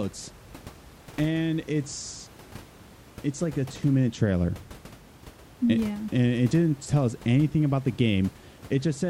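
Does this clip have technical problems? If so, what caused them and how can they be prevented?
No, there are no technical faults to report in this speech recording. The only background sound is the room's own noise, sitting about 22 dB below the speech and belonging to the recording itself rather than to any problem in the system.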